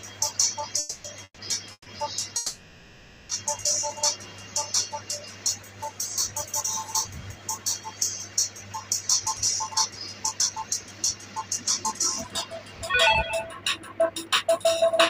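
Early on there are four call audio freezes, at 0.79–1.06 s, 1.24–1.40 s, 1.72–1.88 s and 2.36–3.31 s, where the last sound hangs and fades (the middle two drop to brief silence), likely from late packets draining the jitter buffer. Then from 9.09 s to the end a jitter buffer speed-up plays things about 10% fast at the same pitch, trimming roughly half a second to claw back that delay.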